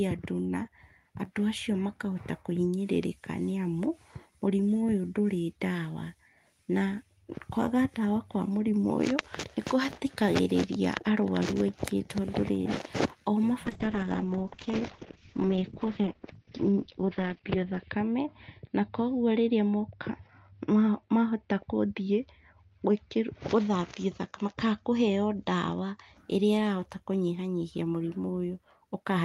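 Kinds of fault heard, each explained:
Call bitrate drop: From 13.67 s to 26.23 s the speech loses quality. The call's bandwidth estimate fell, so the encoder had to spend far fewer bits. The coding turns coarse and the sound grows rough and watery. The top end is cut from about 20 kHz to 6 kHz, so it also sounds muffled. The worst stretch lasts about 4.2 s. The damage fits a fall from roughly 32 kbps to 8 kbps.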